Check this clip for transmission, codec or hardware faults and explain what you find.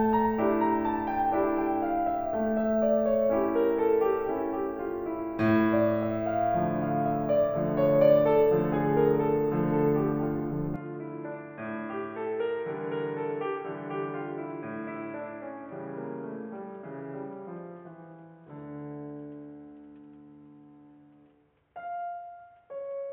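One fault: at 10.76 s the music abruptly turns dull and boxy and stays that way to the end, which points to an input switched to a poorer device, likely a lower-grade microphone or a headset's call profile. The new path passes nothing above 3.8 kHz, so a spectrogram shows the upper bands cut off flat from that moment. There is no gap at the switch, but the waveform drops roughly 5 dB in level and a new, faint noise floor about 40 dB below the music appears.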